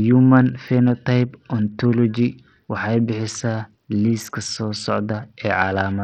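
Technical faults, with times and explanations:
Throughout, Bluetooth SBC compression: the link has likely fallen back to the basic SBC codec with a very small bit pool, which fits a bitrate near 64 kbps. Its few fixed sub-bands share too few bits, so the upper bands are starved and the rest coarsely quantised. The speech loses its treble, which drops out and flickers, while a gritty grain and aliasing cling to the voice across the whole clip.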